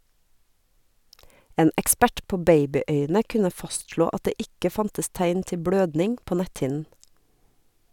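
No technical faults are audible.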